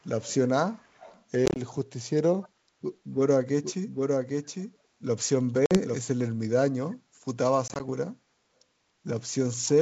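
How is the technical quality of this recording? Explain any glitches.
The recording has three kinds of glitch: faint echo leak early on, a doubled audio track in the middle, and three bursts of packet loss. The speech itself carries the clear, slightly hissy top end of G.722 wideband telephone coding.

From 0.04 to 0.34 s, 0.74 to 1.24 s and briefly at 2.42 to 2.49 s, a faint trailing copy of the speech follows 283 ms behind, about 25 dB below the voice and about 30 dB down in the last instance. This is echo leak, likely from a far end playing the call on a loudspeaker whose echo canceller let some of the microphone pickup slip back into the line.

From 3.63 to 5.99 s the speech is heard twice. A second, full-band copy runs roughly 0.7 s behind, only about 5 dB quieter, with no reverberant tail and hard edges where it appears and disappears. That is a doubled audio track, likely a second capture path or an edit that left two out-of-step copies layered together. 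Unlike echo, it sounds as clean as the original.

Packet loss on an ADPCM call shows up at 1.46 to 1.60 s, 5.66 to 5.79 s and 7.68 to 7.83 s. The first burst loses 70 ms of audio as short holes of up to 20 ms scattered over 100 ms. The second and third each lose 50 ms, the last spread over 120 ms. Each gap is silent and sharp-edged. Because the ADPCM decoder's predictor and step size lose track of the sender's, the speech comes back with a click, a level jump or a brief rough patch before settling.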